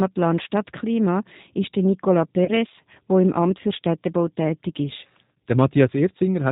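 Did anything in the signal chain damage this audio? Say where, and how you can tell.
Yes. The codec stage is audible across the whole clip: this speech has the slightly rough, synthetic texture of G.729 at 8 kbit/s. Nothing comes through above 4 kHz, and each frame is rebuilt from a vocal tract filter, a pitch predictor and four pulses in each half of a 10 ms frame.

On the network side, there's a G.729 packet loss concealment event from about 2.45 to 2.51 s, just before "wo im". The decoder stretched its last pitch and filter into a fading buzzy tone or coloured noise, which fits one lost packet of about 30 ms, and it took a moment to recover.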